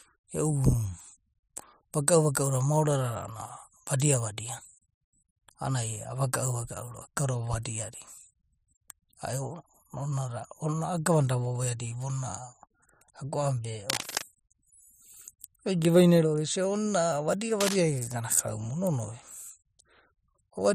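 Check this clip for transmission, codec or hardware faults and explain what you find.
Cable scratch noise occurs twice in the speech. The first burst runs from 13.88 to 14.24 s. A shorter one follows at 17.60 to 17.77 s. Each is a dense, uneven crackle sitting only a little below the speech level. The likely cause is a worn cable or connector being moved, so its contact resistance jumps about rapidly. Those jumps put ragged noise into the signal. It sounds like brief scratching or rustling over the speech.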